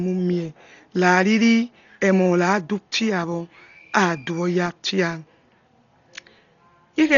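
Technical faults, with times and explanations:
Throughout, Dolby Digital compression: the speech is dull and muffled, with nothing above 7 kHz, and a rough, fluttering noise clings to voiced sounds, pointing to heavy damage at a starved bitrate near 32 kbps. The likely cause is an AC-3 style encoder that narrowed the band and left many frequency lines with no mantissa bits, so the decoder filled those gaps with dither noise that flickers from block to block.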